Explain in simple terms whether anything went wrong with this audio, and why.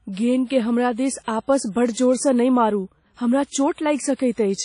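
WMA compression runs throughout this speech, likely the cause of its washy, ringing quality and of the missing sound above about 10.1 kHz, where the encoder discarded detail. Pre-echo appears at 0.46–0.50 s, 1.23–1.28 s (just before "आपस बड्ड") and 4.15–4.19 s: a brief hiss of roughly 45 ms arrives before sharp sounds, because the codec spread its noise back across each block.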